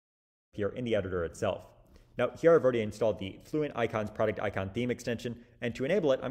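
No technical faults can be heard in this audio, which opens with a smooth, deliberate fade-in from around half a second that reaches full level by 0.57 s.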